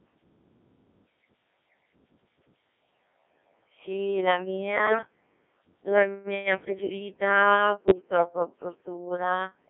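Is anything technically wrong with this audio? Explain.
Yes. Two faults are audible.

Throughout, the speech passes through the Codec 2 vocoder. Only pitch, voicing, energy and a spectral envelope survive, so the decoder rebuilds the speech from sine waves. It sounds robotic and buzzy, confined to 200 Hz to 3.4 kHz, which fits about 1.6 kbit/s.

At 4.75 to 4.98 s, and again at 7.88 to 8.02 s, bit errors on digital voice radio strike. Flipped bits, at a rate of a few percent, corrupt the parameters of whole frames. The speech lurches in pitch, level and tone, breaking into warbles and bleeps.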